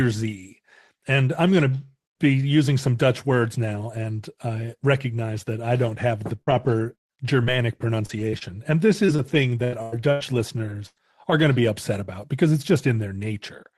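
From 6.35 to 7.48 s, after "I don't have the," and from 8.06 to 10.98 s, before "are going to be," repeated packet loss (robotic sound) chops the speech into fragments. Gaps up to 97 ms are patched with repeated sound, which shows as smeared, stuttering blocks on a spectrogram.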